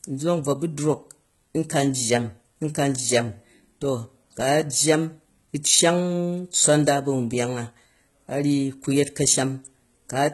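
HE-AAC compression runs through the whole speech clip, and the sound points to heavy low-bitrate coding, around 16 kbps. Nothing is present above about 11.8 kHz. The treble has the hallmarks of spectral band replication, which likely explains it: the upper band is rebuilt by copying lower bands upward under a coarse envelope rather than carrying the original detail. Its harmonics don't line up across the crossover, so s sounds come out gritty, metallic and lispy.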